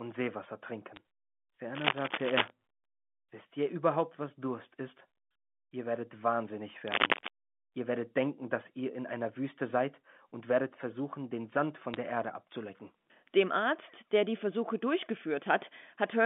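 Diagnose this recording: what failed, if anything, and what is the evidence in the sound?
Two spots on the digital line take bit errors: a sharp tick at 0.96 s and another brief click from 11.94 to 11.96 s. The speech around them is untouched, which is what you'd expect when a few bits flip in the G.711 A-law stream. Each flip corrupts one sample, and a hit on the sign or a high-order bit jumps the waveform hard enough to click. The error rate is low, so you get isolated ticks rather than continuous crackle.

There are two bursts of cable scratch noise, from 1.74 to 2.50 s and from 6.88 to 7.28 s. It's dense, uneven rustling, about as loud as the speech in the first burst and a bit louder in the second. That points to the analogue wiring ahead of the converter, most likely a worn cable, connector or pot being moved. The contact resistance jitters rapidly and dumps broadband crackle straight into the signal.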